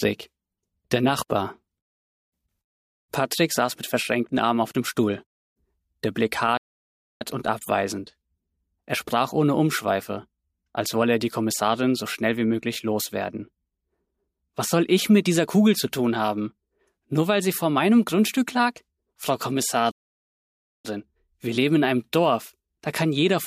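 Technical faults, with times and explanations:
6.57–7.21 s and 19.91–20.85 s, playback stall: the sound cuts out mid-flow and drops to dead silence, first for about 0.64 s, then for nearly a full second (about 0.93 s). These gaps are long enough to sound like the player simply stopped. The likely cause is the player running dry of buffered data, or its audio thread getting blocked, so nothing reached the output until it caught up again.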